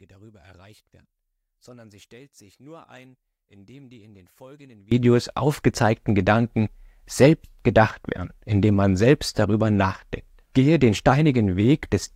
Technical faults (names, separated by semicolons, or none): one channel inverted